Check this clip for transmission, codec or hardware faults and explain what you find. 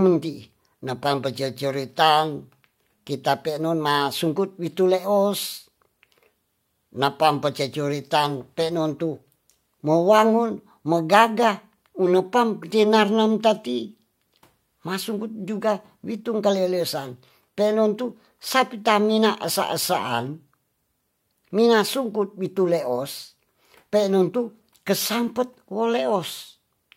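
Three brief corrupt frame decoded events interrupt the speech, at 8.99 s, 12.62 s and 17.98 s. In each, a single compressed frame arrived with flipped bits and was played anyway, so misread gains or codes placed energy at frequencies that don't belong there. Each is a short blip or squeak lasting only about one frame. They are faint, with error peaks of roughly -45 dBFS, the one at 12.62 s a little louder at about -40 dBFS.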